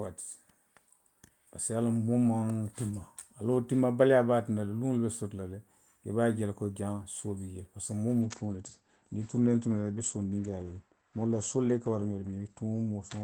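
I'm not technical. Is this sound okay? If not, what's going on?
No. At 8.22 s there is a call bitrate drop: the connection judged its capacity had shrunk, so the call was sent with far less data. From there to the end, speech sounds rougher and more muffled, with everything above about 8 kHz cut off.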